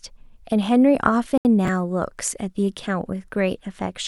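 At 1.38 s the speech drops to silence. The gap lasts 74 ms, until 1.45 s. Then the sound resumes. This is most likely a Bluetooth stall. Radio interference would have held back packets on the wireless link. The headphones' buffer emptied while waiting. Playback had nothing to play, so it paused. When the resent packets arrived, it carried on. The result is a brief, clean hole in the speech.

From 1.65 to 1.68 s there is a short jumbled patch. Here chunks play out of order. The audio moves in 10 ms chunks. One chunk arrived or was written two chunks late. It plays after the two chunks that should follow it. No audio is lost. But the sequence is wrong across 30 ms. Three hard joins form where the pieces meet. The speech sounds briefly scrambled.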